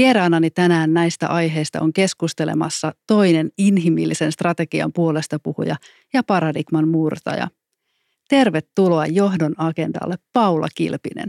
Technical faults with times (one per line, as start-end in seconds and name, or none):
10.36-10.38 loud pop